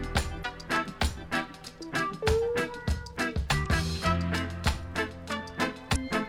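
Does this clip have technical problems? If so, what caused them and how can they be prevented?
Yes. Damaged data in a compressed stream at 0.41–0.45 s, 3.62–3.66 s and 5.92–5.96 s: corrupted bytes make the decoder lose frame sync, producing brief blips. Prevent this with checksummed, reliable transfer and storage of the compressed file.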